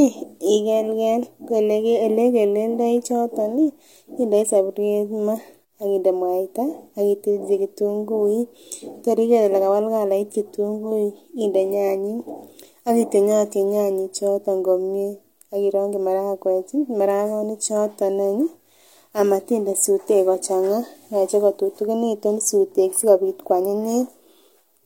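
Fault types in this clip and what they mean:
No technical faults can be heard in this speech recording. There is nothing to list.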